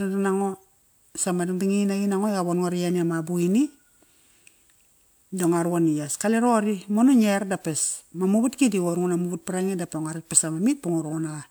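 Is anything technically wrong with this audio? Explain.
No, nothing technically wrong is audible anywhere in this speech recording.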